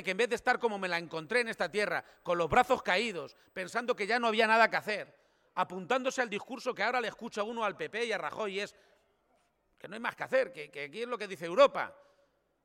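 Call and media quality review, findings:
USB whine, 1.14–4.14 s. Faint fixed-pitch tone at 8 kHz, strongest at 16 kHz. 125 µs microframe current leaking through power or ground.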